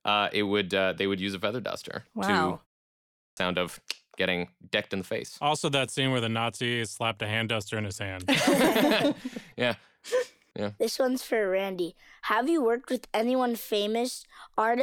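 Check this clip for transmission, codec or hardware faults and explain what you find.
One fault stands out, a hardware-side problem rather than a transmission or codec one. Clipped start after a pause, from 2.88 to 3.37 s: after a 0.3 s gap, the output device had dropped into a low-power state and needed time to wake, so about 0.49 s of speech is swallowed and the phrase bursts in abruptly, missing its opening sounds.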